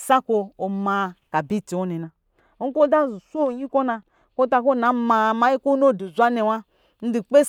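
From 2.03 s to 4.86 s, de-emphasis is applied wrongly. A treble cut meant to reverse pre-emphasis lands on speech that never had any, or is applied a second time. The top end slopes away smoothly, about 8 dB down at 10 kHz. The speech turns dull and muffled.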